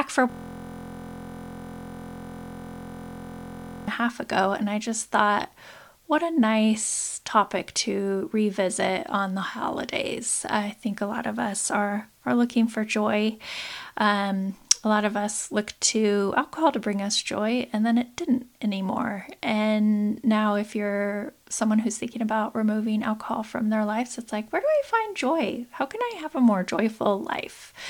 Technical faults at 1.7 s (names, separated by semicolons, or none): system hang loop